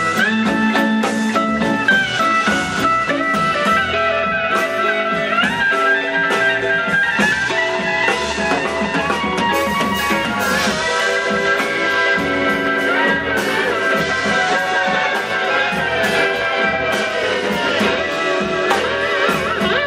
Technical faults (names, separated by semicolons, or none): none